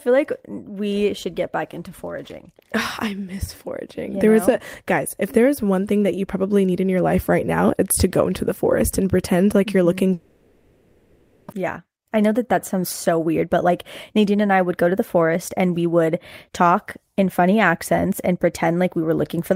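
From 10.13 to 11.54 s the speech gives way to a smeared buzz that carries on for about 1.4 s without falling to silence. When speech resumes, about a second of it is simply gone. This is likely a long network dropout, far longer than a brief packet-loss gap.

From 11.62 to 13.69 s, and again from 14.18 to 16.09 s just before "talk in funny accents", the speech hurries at about 109% and then 107% speed. This is a jitter buffer speed-up trimming roughly a fifth and then a sixth of a second of built-up delay. The pitch stays unchanged, which rules out a simple playback-rate error.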